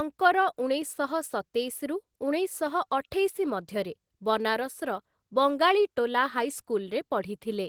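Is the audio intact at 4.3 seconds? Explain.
No. At 4.3 s the speech carries Opus voice compression, present across the whole clip. The sound points to a low bitrate around 16 kbps, with linear-prediction coding below 8 kHz and a thin transform layer above, giving plainly audible muffling, hoarseness and a faintly robotic edge.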